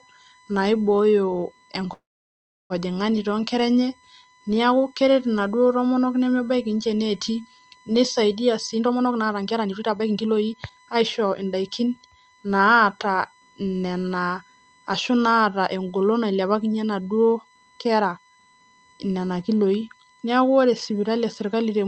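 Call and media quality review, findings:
USB whine, throughout: steady fixed-pitch tone at 1 kHz, about 35 dB below the speech. Points to USB bus current in 1 ms frames leaking into the audio through power or ground. Check the interface's grounding and supply.

Call audio freeze, 1.93–2.73 s: the last sound hangs and fades, then about 0.69 s of silence before the speech resumes where it stopped. Nothing is lost, but 767 ms of extra delay is added. The likely cause is delayed packets draining the jitter buffer.

Jitter buffer speed-up, 8.68–11.43 s: the speech sounds hurried at unchanged pitch, running about 128% of normal rate. The receiver trims repeated pitch-period slices, roughly 0.7 s in total, to work off the surplus buffered delay.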